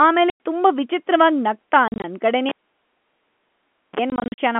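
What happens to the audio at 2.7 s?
At 2.7 s the speech sits inside a cable pulled and plugged in event that runs from 2.49 to 3.99 s. The live lead is yanked out with a pop, and the signal then drops to near silence for about 1.46 s. As the plug goes back in, its tip touches first and picks up a 34 ms burst of 60 Hz mains buzz before full contact returns the sound with a second pop, still band-limited by the telephone path.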